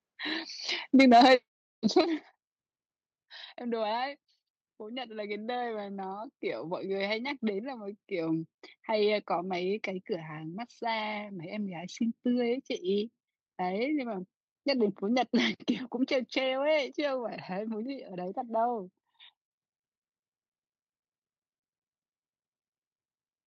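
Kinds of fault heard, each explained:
Microphone overload: From 0.99 to 1.35 s, and again from 1.97 to 2.01 s, the loudest peaks have their tops sliced off. This adds a harsh, crackling edge. The first burst runs about 6 dB over, with roughly 7% of samples clipped. The likely cause is input volume set too high.
Microphone volume stepped down: At 1.01 s the level of the speech and background drops suddenly, by about 3 dB. At 2.01 s it drops again, by about 8 dB. The first step comes during a distorted stretch, the second right after one. This is likely software lowering the input volume to stop the clipping.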